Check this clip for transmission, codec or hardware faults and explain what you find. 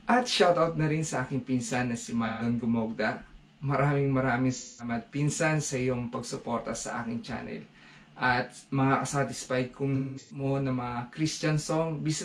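Three faults turn up, all AAC frame loss with concealment, at 2.27 to 2.42 s (128 ms lost), 4.54 to 4.89 s (213 ms) and 9.95 to 10.44 s. The decoder rebuilt missing frames from the last good spectrum, so each patch sounds smeared and noisy. The last one is scattered, with a longest run of about a fifth of a second.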